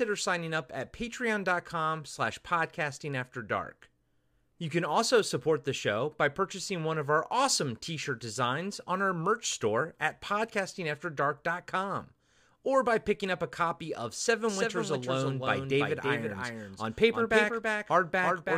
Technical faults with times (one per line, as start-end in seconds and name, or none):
14.49-18.58 doubled audio track